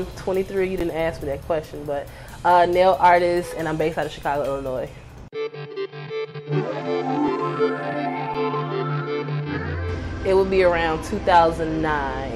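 At 0.80 s and again at 8.34 s there's an underrun with held sample: the buffer ran dry, the output froze flat for 10 ms then 5 ms, and resumed, having skipped about that much audio.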